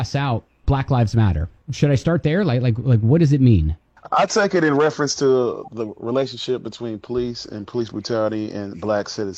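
No technical faults can be heard anywhere in the audio; the signal stays continuous and stable throughout.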